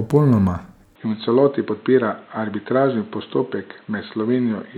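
A short speech clip that changes character at 0.96 s: from there to the end, everything above 4.1 kHz disappears, so the sound goes dull and boxy. A new background noise comes in too, sitting roughly 35 dB under the signal. The change happens with no gap and no real jump in level, which points to the input likely having switched to a poorer device, such as another mic or a headset's call mode.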